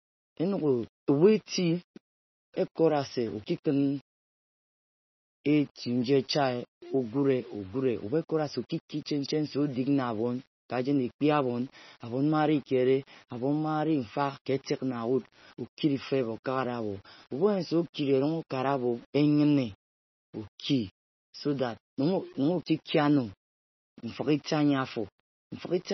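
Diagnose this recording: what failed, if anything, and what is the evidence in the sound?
Sample-format conversion failed. A grainy distortion rides on the speech through all of it, and it is most audible on quiet passages and decays. The error tracks the signal rather than sitting as a steady floor. It lies roughly 30 dB below the speech. That fits a word length of about 7 bits, most likely from rounding without dither. Each sample snaps to a coarse step, so low-level detail turns gritty instead of fading into smooth noise.

The codec stage also failed. There is heavy codec damage from start to finish. Everything above 5.9 kHz is gone, so sibilants lose their top. The mid band sounds watery and swirly, and attacks smear. The sound points to MP3 at a low bitrate, around 24 kbps. Starved of bits, the encoder drops weak spectral lines. These lines flicker in and out between frames, and the treble is cut at a fixed point.

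Pre-echo appears at two sharp onsets, also from the codec stage. At 14.45 s a short burst of hiss arrives about 16 ms ahead of an attack. From 22.63 to 22.66 s a longer smear of about 36 ms precedes another. Both attacks sound softened. The transform spreads its quantisation noise across the whole block. The noise sized for the loud onset therefore spills into the quiet moment just before it.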